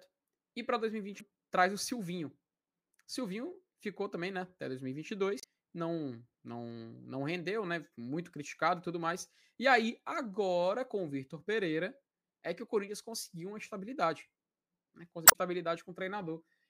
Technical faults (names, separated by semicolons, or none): damaged data in a compressed stream